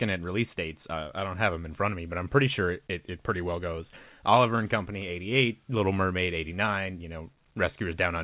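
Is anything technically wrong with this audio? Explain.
No, there are no faults.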